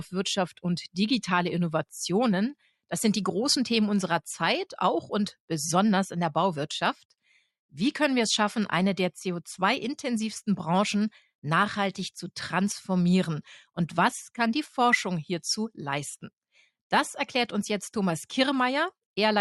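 From 6.99 to 7.39 s, the noise suppressor cuts sound it mistook for noise, dipping steady parts by about 10 dB while sudden attacks pass, unlike a full dropout.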